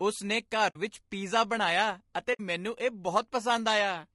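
All through, the speech has a rough, grainy edge with noise between harmonics, likely from low-delay AAC compression at a low rate, around 32 kbps. At 0.69–0.76 s and again at 2.33–2.40 s, there's AAC frame loss with muting: the decoder zeroed about 60 ms each time, leaving soft-faded gaps.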